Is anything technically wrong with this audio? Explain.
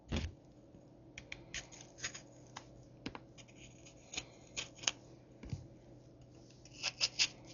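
Yes. Throughout the recording there is heavy codec damage that most likely comes from Dolby Digital compression at a low bitrate, around 48 kbps. At that rate the encoder narrows the band, leaving nothing above 7 kHz. It also starves many frequency lines of mantissa bits, and the decoder fills those gaps with dither noise. The sounds in the clip therefore come across dull and muffled, with a rough, fluttering grain clinging to any tonal parts.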